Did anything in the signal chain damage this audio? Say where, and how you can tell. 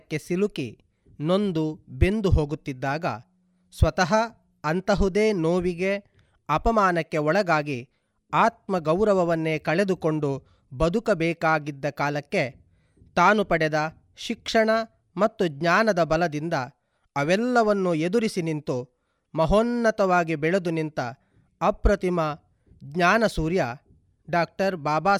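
No, nothing in this speech recording stood out on listening as damage from any stage of the signal chain.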